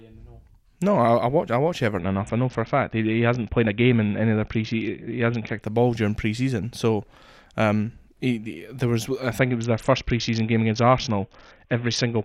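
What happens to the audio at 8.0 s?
Nothing goes wrong at 8.0 s; the speech runs on intact through that moment.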